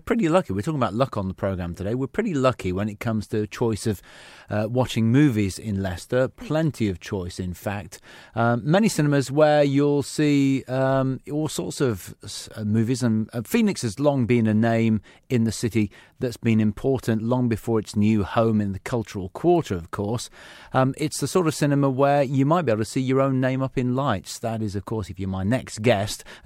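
No technical faults occur at any point in this speech recording.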